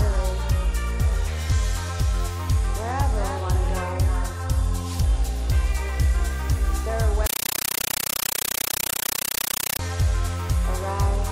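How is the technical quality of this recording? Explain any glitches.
One serious glitch. A compressed stream is played as audio from 7.26 to 9.79 s: undecoded Dolby Digital data is treated as samples, giving loud chattering static, bursts repeating 31.25 times a second.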